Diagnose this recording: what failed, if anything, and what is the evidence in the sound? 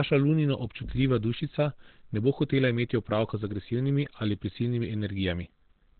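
The speech sounds muffled and hoarse throughout, with nothing above about 4.3 kHz and a heavy, rough coarseness to every syllable. The likely cause is Opus compression at the codec stage: a narrowband SILK speech mode at a low rate, which fits roughly 12 kbps.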